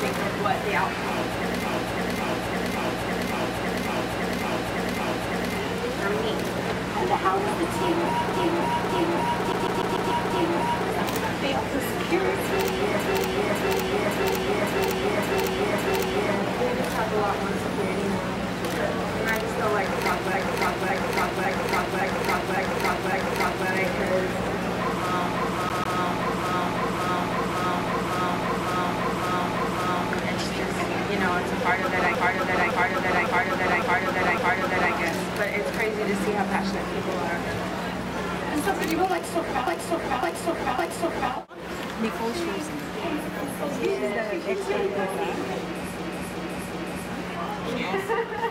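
A stutter recurs through the audio: the same slice of just over half a second (about 0.56 s) plays again and again. This happens at 1.65–5.55, 8.34–10.86, 13.00–16.34, 20.34–23.68, 25.35–30.10, 32.15–34.93 and 39.67–41.34 s. The final instance, at 45.99–47.10 s, loops a shorter 0.37 s piece. These are repeated frames. A run of compressed frames was written or sent more than once, and the decoder plays the same stretch again. The block lengths fit runs of six frames, and four in the last case. Each repeat adds its own length to the clip: from about 1.1 s at the end to 4.5 s at 25.35 s.

Inside two of those passages a much faster, even stutter appears. At 9.52–10.11 s and again at 25.69–25.98 s, a fragment of about 0.15 s is replayed rapidly, with a short mute at each jump, like a skipping disc. This is a CD stuck on one turn. A scratch knocks the laser back one track at the same point on every revolution, so the pickup keeps rereading that small section of audio.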